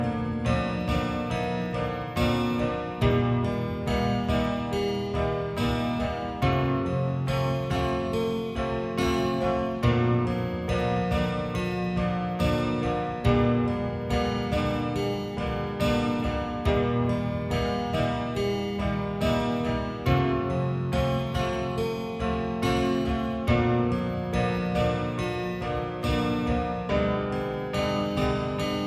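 From start to finish there's a wrong sample rate: everything runs at about 0.73 speed, dropped 5.55 semitones, which fits 44.1 kHz audio played at 32 kHz.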